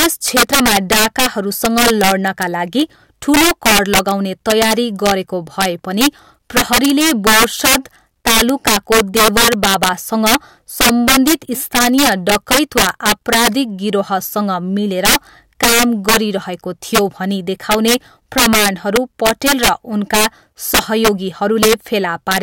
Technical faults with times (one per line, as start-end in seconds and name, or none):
0.00-22.42 integer overflow